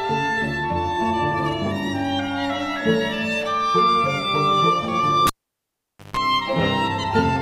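At 5.27 s, a cable is pulled and plugged in. A pop, then 0.85 s of near silence. Then 50 Hz buzz as the tip touches.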